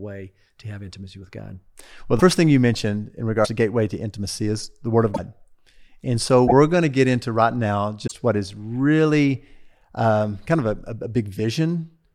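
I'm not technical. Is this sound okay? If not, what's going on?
No. A broken MP3 bit reservoir causes brief glitches at 2.18 to 2.21 s (just before "thing you mentioned in"), 3.44 to 3.48 s (just before "to gateway to intimacy"), 5.14 to 5.19 s, 6.47 to 6.52 s (before "going to get into") and 8.06 to 8.12 s. Each one is a short chirp, a burst of noise or a tiny gap, and the speech skips ahead. MP3 files store some sound data in earlier chunks. When chunks go missing, likely in a damaged or cut-up file, the next chunk reads the wrong data and garbles for a moment.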